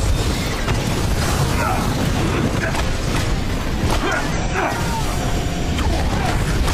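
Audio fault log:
0.51–0.56 s and 4.32–4.38 s, damaged data in a compressed stream: corrupted bytes in the encoded stream made the decoder misread frames and lose sync while it hunted for the next valid header, producing two brief glitches of about 50 ms each.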